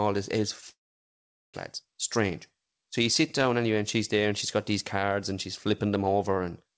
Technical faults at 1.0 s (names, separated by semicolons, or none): long network dropout